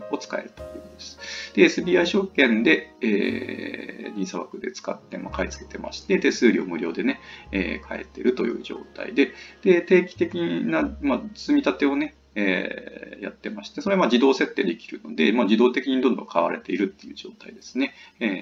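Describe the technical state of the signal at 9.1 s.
Nothing is wrong with the signal at 9.1 s; the audio there is intact, with no dropout, distortion or other technical fault.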